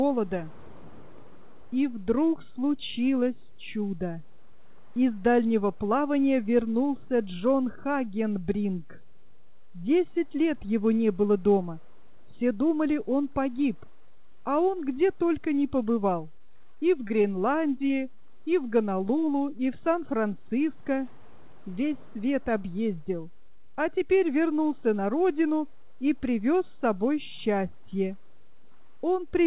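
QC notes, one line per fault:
16.36–17.26 s, repeated packet loss (robotic sound): over this stretch there are eight short holes, the longest about 22 ms, each patched by extending the preceding sound before the next hole arrives. About 116 ms is synthesised against 40 ms actually missing, so roughly 13 percent of the span is concealment. Those closely spaced patches repeating the same waveform give the choppy, buzzy, mechanical texture, with small pieces of the sound gone.
17.88–17.91 s, short concealed packet loss: a single gap of about 20 ms, covered by roughly 16 ms of extrapolated sound and then crossfaded back into the real signal. It comes across as a brief smear or wobble. Because the fill continues the previous sound rather than recovering what was lost, a short transient falling in that window can disappear.
18.15–18.22 s, short stall from a late packet: a packet arrived late, the jitter buffer ran dry, and the receiver held the last sound for about 19 ms until it came in, then resumed from where it left off. 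Nothing is lost, but one sound lingers slightly too long with a faint buzz. Shortly afterwards about 10 ms is trimmed to bring the delay back down.
20.84–21.56 s, jitter buffer speed-up: the buffer had built up more audio than its target, so the receiver cut out short pitch-period-sized slices many times over, about 40 ms in total. Playback runs at about 104 percent speed with pitch unchanged, so this passage runs a little fast and its timing pushes forward.
The clip went through a G.711 mu-law call path at 64 kbps, which leaves nothing above 4 kHz.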